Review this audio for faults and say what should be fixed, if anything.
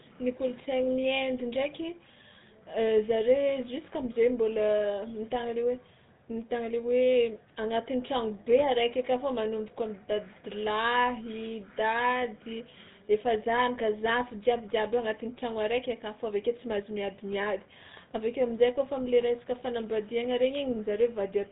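The GSM full-rate codec damage runs through the whole clip. It is plainly audible. The speech sounds buzzy and gravelly. Nothing comes through above 3.8 kHz. The codec models the vocal tract and drives it with sparse, regular pulses, which fits a 13 kbps GSM stream. Record or route the speech over a wideband path rather than a GSM full-rate link.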